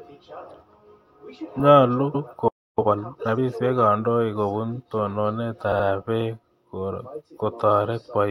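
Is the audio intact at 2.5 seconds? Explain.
No. A playback stall from 2.48 to 2.79 s, likely the player running short of data, cuts the speech to silence for 0.3 s before it resumes.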